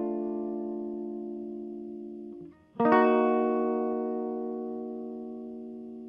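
Nothing to flag in this bit of music: it reaches us through a call-style codec path that rolls the top end off at around 12 kHz, which is simply how that path is set up, and no fault turns up anywhere along the way.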